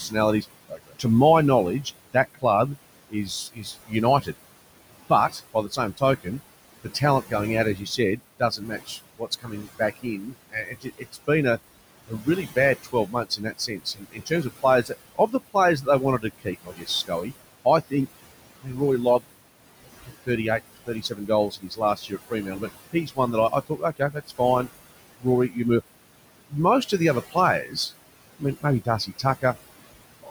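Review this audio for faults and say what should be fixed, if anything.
Throughout the recording, the background pumps down between phrases and swells back under them. These are noise suppressor artifacts: the suppressor cuts bands it judges to be steady noise by about 20 dB, frame by frame, acting on room noise that sits only about 14 dB below the speech.

Word edges and soft consonants sound swallowed or faint at 0.08–1.05 s, 1.83–4.35 s, 5.1–17.93 s, 18.61–19.25 s, 19.83–25.57 s and 26.49–29.55 s. This is speech cut by the noise suppressor, which mistook quiet speech for noise and pulled it down by as much as about 21 dB, amounting to several seconds of speech overall.

Lowering the room noise at the microphone, or running the suppressor with less reduction and a slower, speech-aware decision, would prevent both.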